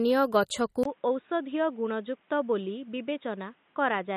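From the very start the speech has that watery, swirly quality you get from MP3 compression. The encoder was likely starved of bits, which fits a low bitrate of around 32 kbps. There's nothing above 15 kHz. Weak frequency components flicker in and out between frames, so the sibilants go a bit metallic and chirpy and consonant onsets smear. The damage is plainly audible and carries on for the whole clip.

At 0.83 s there's a brief gap of about 20 ms. After it, the sound turns boxy and dull, likely because the input switched to a poorer device. That new path cuts off everything above 3.8 kHz, so the top end of the speech is gone. The level drops a few dB, and a faint new background hiss comes in well beneath the speech. It stays that way right to the end.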